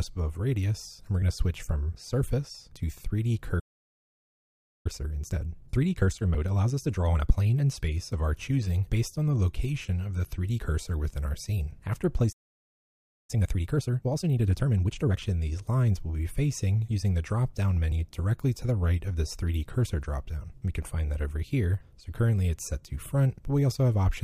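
At 3.59 s the sound halts mid-flow and stays silent until 4.86 s, a playback stall of about 1.25 s, with a second at 12.32 to 13.30 s (about 0.96 s). Each likely comes from the player running dry or its thread blocking. On a waveform each gap is a flat line, and on a spectrogram a blank vertical band.

Time-compressed catch-up follows each stall. From 4.86 to 7.86 s the audio plays at 1.25 times speed, and from 13.30 to 15.22 s at 1.5 times. The player cuts out and cross-fades short slices, so the sound is hurried at unchanged pitch. A spectrogram shows squeezed timing with harmonics at their normal heights.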